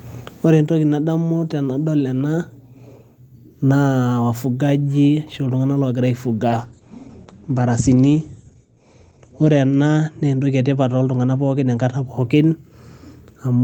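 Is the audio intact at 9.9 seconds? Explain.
No. At 9.9 seconds the speech sounds muffled and rough and watery, with the crisp upper range gone. This falls inside a call bitrate drop running from 6.49 to 12.13 s. The call's bandwidth estimate fell, so the encoder was pushed from 32 kbps down to 12 kbps, holding its lowest rate for 3.1 s. At that rate it codes coarsely and narrows the audio band from 20 kHz to 8 kHz.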